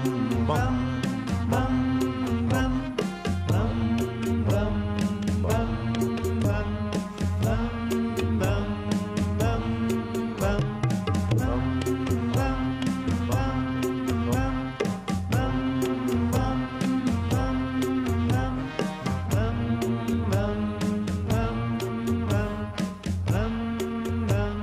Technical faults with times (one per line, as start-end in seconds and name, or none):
none